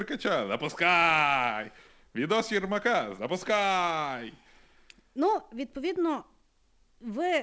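No faults are present; the speech has come through a call path whose band stops at 8 kHz, consistent with a G.722 wideband codec.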